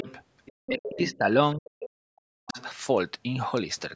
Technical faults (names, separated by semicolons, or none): other side's voice leaking through; speech suppressed in double talk